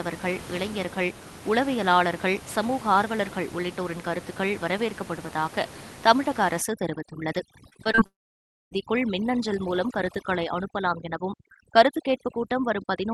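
From 6.61 s to the end, overdone noise removal kicks in. The noise reducer is clearly set too hard, so frequency bands near its noise estimate get pulled right down, taking quiet bits of the voice with them. The background drops and breaks up into twinkling specks.

Between 7.69 and 8.01 s there's repeated packet loss, and it sounds robotic. A run of short holes, none longer than about 22 ms, gets patched by stretching the previous sound, covering roughly a third of that stretch. You hear choppy speech with bits missing.

Right after, from 8.06 to 8.77 s, the audio buzzes briefly, fades, then goes dead for about 0.6 s before speech resumes with that chunk simply gone. That's most likely a long network dropout, with the receiver extending the last sound until it gave up.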